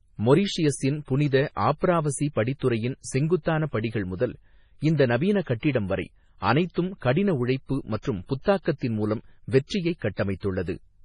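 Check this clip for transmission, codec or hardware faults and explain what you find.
One codec fault runs through the whole recording. MP3 compression, throughout: the speech has nothing above 10.5 kHz and sounds heavily watery and swirly, with chirpy s sounds. This likely comes from an encoder starved of bits, consistent with roughly 24 kbps, cutting the treble and dropping weak frequency lines that flicker between frames.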